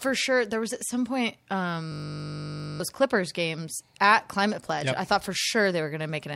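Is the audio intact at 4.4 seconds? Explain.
Yes, the speech at 4.4 seconds plays through without any audible dropout, click, distortion or other fault.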